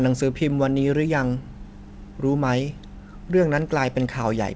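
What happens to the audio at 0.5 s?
Nothing goes wrong at 0.5 s: the speech passes through intact, with only the usual narrowed top end of a wideband call path that stops at about 8 kHz.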